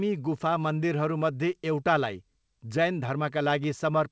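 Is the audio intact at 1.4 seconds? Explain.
Yes, the audio is intact at 1.4 seconds; the sound there has passed through the call path's G.722 coding as normal, with nothing above 8 kHz, and there is no fault.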